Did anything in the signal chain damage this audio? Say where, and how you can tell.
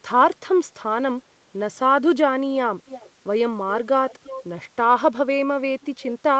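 Yes. An echo leak occurs from 2.86 to 3.1 s and again from 4.1 to 4.44 s: a faint copy of the speech trailing 338 ms behind, roughly 15 dB quieter. It likely comes from call processing, where a loudspeaker-side echo canceller let residual pickup back into the call.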